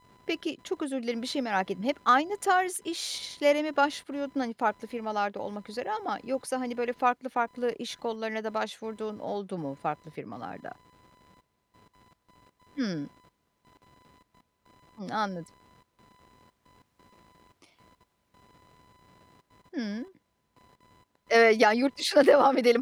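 Throughout the speech runs computer activity noise, a faint chirping buzz pulsing at around 1 kHz and sitting roughly 35 dB below the voice. Processor or peripheral load swings disturb the shared ground. Unlike steady mains hum, it flickers with the computer's workload, not the speech.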